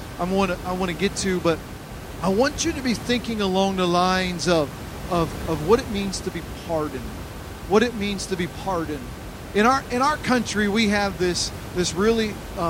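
Nothing stood out on listening to this speech recording.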